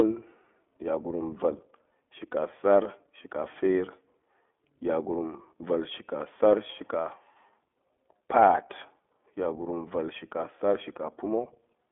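Across the whole recording, the speech has passed through the iLBC codec, which codes each short frame's excitation on its own rather than building on the previous frame; the framing fits 20 ms blocks at around 15 kbps. The result is a line band of roughly 250 Hz to 3.6 kHz with nothing above 3.8 kHz, so the speech sounds thin and muffled, and the coding leaves a plainly audible rough, slightly synthetic edge.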